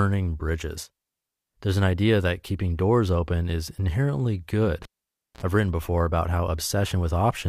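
In this speech clip, right after "doors open is inherently" at 4.83 s there is a pop, about 0.55 s of near silence, a short 56 ms burst of 60 Hz mains buzz, then another pop as the sound returns at 5.43 s before "I've written before about". A live cable was pulled and plugged in again.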